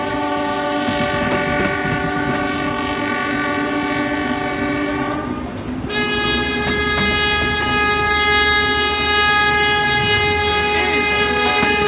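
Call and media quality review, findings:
No faults found. The WebRTC call path is working normally, with nothing heard above 4 kHz, a narrowband ceiling that fits a G.711 mu-law codec at 64 kbps.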